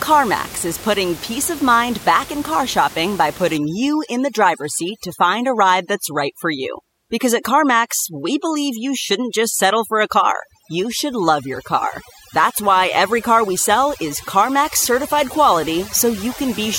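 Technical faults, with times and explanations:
3.57–16.78 s, overdone noise removal: noise reduction set too strong after "in car shopping by" shuts off bands near its noise estimate, leaving the background lowered and broken into twinkling, warbling specks.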